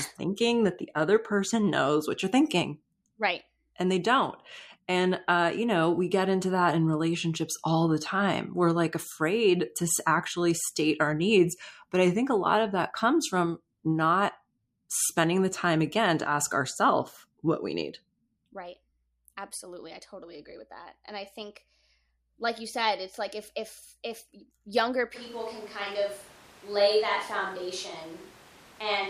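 At 25.17 s the speech abruptly turns roomy and hollow, thinner in the bass, with background noise rising to about 25 dB below the speech while loudness barely changes. This lasts to the end: a switch to a distant microphone, likely after the close microphone's signal dropped out.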